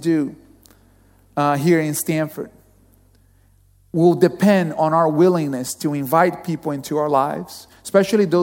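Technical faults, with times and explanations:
Nothing stood out on listening to this speech recording.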